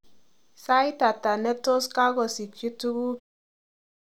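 No technical faults are audible in this speech.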